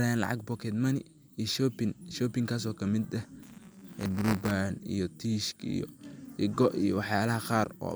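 A speech clip with buffer tearing from 3.42 to 4.51 s: a robotic buzz at 188 Hz, which fits a 256-sample buffer, where a small slice of each period repeats audio about 10 ms old. Unlike dropouts or random crackle, it is steady and present only with signal.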